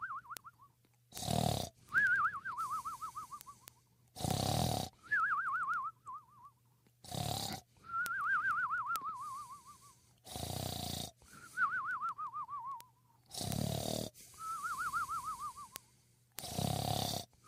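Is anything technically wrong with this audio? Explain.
Yes. Sharp ticks of uneven strength repeat about every tenth of a second from 0.19 s to 17.46 s. These are word clock ticks: an unlocked receiving clock drifts about 200 ppm, dropping or repeating a sample each slip.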